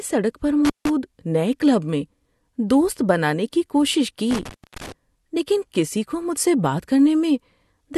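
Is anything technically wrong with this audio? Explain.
Yes, this speech clip has an intermittent contact fault, heard twice. The first comes between 0.65 and 0.90 s, where the line opens for roughly 160 ms, and the second between 4.31 and 4.92 s, with a longer dropout of about 270 ms. It sounds like a loose plug or cable briefly losing its connection. The audio cuts out abruptly, there's a crackle at the break and again where contact comes back, and faint hiss is left in the gap.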